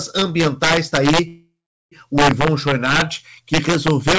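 Throughout the speech, loud peaks crack violently. This is integer overflow. The level runs about 7 dB past the largest integer value. Those peaks are not limited. They wrap to the opposite sign instead. Only a small share of samples flip, but each one jumps across the full range. The cracks are far sharper than clipping.

From 1.28 to 1.93 s, just after "ambientais está", a call audio freeze occurs. The last sound carries on as a fading buzz or hiss, then about 0.41 s of silence follows. Packets were likely held up in transit, leaving the jitter buffer empty. When they arrive, the speech resumes where it stopped. A 0.64 s gap is inserted and nothing is lost. The G.722 call path removes everything above 8 kHz.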